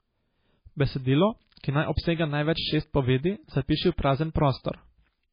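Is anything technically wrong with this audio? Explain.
Yes. Throughout the speech there is heavy MP3 compression damage, likely from a very low bitrate around 18 kbps. Nothing remains above 5 kHz, and the encoder, starved of bits, drops weak spectral lines that flicker between frames, giving a watery, swirly texture, metallic chirps on s sounds and smeared consonant attacks.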